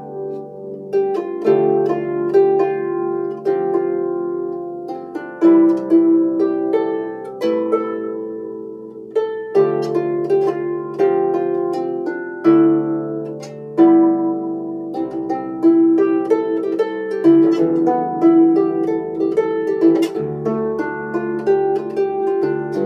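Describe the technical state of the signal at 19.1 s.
At 19.1 s the signal is intact, with no audible fault at that point.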